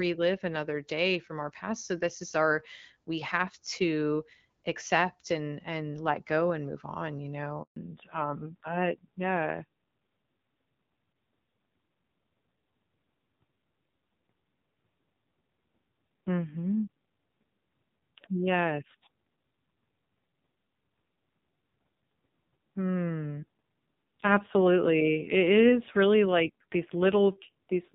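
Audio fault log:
7.62 to 7.76 s, handover gap: Right after "and move on you" the sound dies within a few tens of milliseconds. About 140 ms of silence follows. No audio frames arrived while the call switched networks, so that stretch is lost.
7.76 s to end, fallback to narrowband: From here nothing above 4 kHz remains. The sound turns duller and rougher than the lightly coded HD Voice before it. This points to a drop from AMR-WB at 12.65 kbit/s to AMR-NB at around 5.9 kbit/s.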